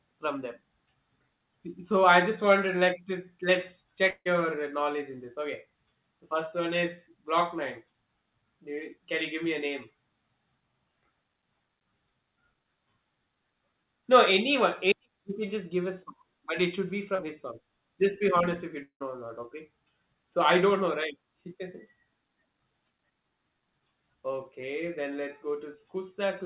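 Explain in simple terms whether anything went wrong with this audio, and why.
Yes, two kinds of problem can be heard.

At 4.1 to 4.27 s and again at 18.82 to 19.02 s, the sound smears into a fading buzz, goes briefly silent, then resumes with a piece missing. This is likely a long network dropout: audio stopped arriving, so the receiver stretched the last sound until it faded out.

At 17.15 to 17.20 s and 25.72 to 25.87 s there are tiny smears or wobbles, each lasting only a few hundredths of a second. That's short concealed packet loss. Small pieces of audio arrived too late, and the receiver filled each gap by continuing the previous sound before blending back in.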